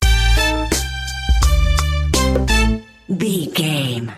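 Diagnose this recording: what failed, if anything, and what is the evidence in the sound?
Nothing in the recording points to a failure anywhere in the chain. No stage, from the wiring and converter through to storage and playback, leaves an audible mark.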